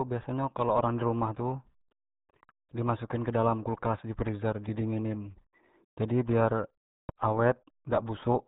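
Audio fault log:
Throughout: RealAudio 14.4 codec. The speech is muffled and gargly, with nothing above 3.8 kHz. The heavy damage fits an 8 kbit/s dial-up codec.
4.69–4.84 s and 7.09–7.11 s: loud pop. A double pop follows "in kedala kulkas freezer", then a single pop after "jadi biar". Each stands well above the speech. The likely cause is a voltage step from a plug, switch or driver glitch.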